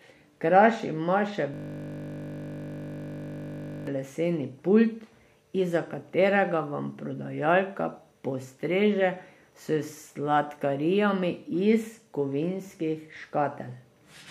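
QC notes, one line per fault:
1.54–3.87 s, system hang loop: right after "ima še" the speech collapses into a steady, flat buzz at 50 Hz that holds for about 2.3 seconds before normal audio resumes with "leseni pult". The machine or its audio driver stalled while the sound hardware kept replaying the same 20 ms stretch of its ring buffer, over a hundred times in a row. A loop that short repeats fast enough to fuse into a pitched drone rather than a stutter.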